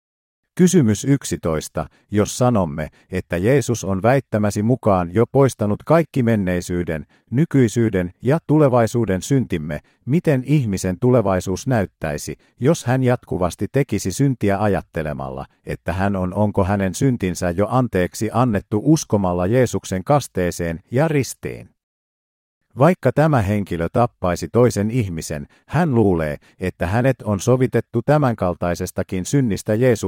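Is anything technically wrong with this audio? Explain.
No, nothing technically wrong stood out on listening to this speech recording.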